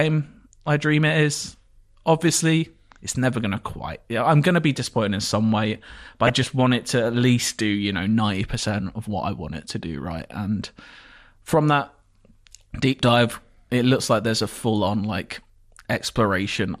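From the start to the end of the speech, the sound is dull and granular, with a gurgling edge and a top end that seems to flicker in and out. That is MP2 compression, likely at a data rate too low for the material. The result fits roughly 80 kbps. With too few bits, Layer II shuts down its upper sub-bands frame by frame, and the bands that remain are coarsely quantised, so the codec damage is plainly audible throughout.

Between 6.27 and 6.44 s, DAB burbling breaks through as a short burst of corrupted sound over the speech. Bit errors have slipped past the error correction into the MP2 data: corrupted samples put short blips of noise in single sub-bands, and corrupted scale factors make sub-bands jump in level for up to a frame. The length of the burst fits about nine frames being hit. The way it sits on top of intact audio points to a low error rate, on the order of a fifth of a percent.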